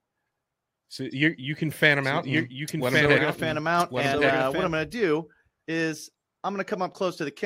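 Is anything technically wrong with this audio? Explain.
Yes. From 2.04 to 4.68 s, between "you you can fan" and "I'm gonna do is", a doubled audio track appears. A full-band copy of the speech trails by about a second at roughly 5 dB lower, likely from a slower second capture path or an edit holding two offset copies. The copy has no decay or room colour and starts and stops abruptly. A spectrogram shows the same harmonic patterns repeated a second later, with sharp vertical edges at both ends.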